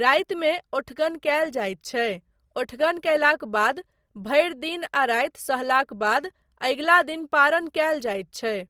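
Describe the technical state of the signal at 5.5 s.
At 5.5 s, as throughout, the speech shows Opus compression: too few bits, likely near 24 kbps, so noise-filled bands make tones grainy and rough.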